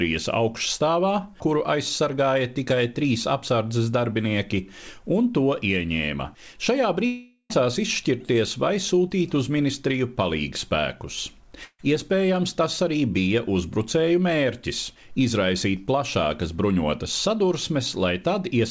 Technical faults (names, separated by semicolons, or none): long network dropout